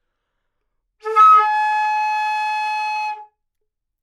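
Nothing technically wrong can be heard in this recording of sounds. There is no moment in the audio where a fault shows itself.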